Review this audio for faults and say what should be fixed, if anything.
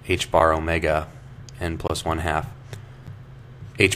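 Block of digital silence at 0.39 s (6.5 ms), 1.88 to 1.90 s (20 ms) and 3.07 s (10 ms): the output was replaced by empty blocks, either because a buffer went unfilled in time or because a calculation gave invalid values. The two shortest gaps are heard as ticks, and the 20 ms gap as a brief hole. Each gap shows as a flat line in the waveform and a blank vertical stripe on a spectrogram. To prevent it, give the audio thread enough buffer headroom and guard the processing against invalid values.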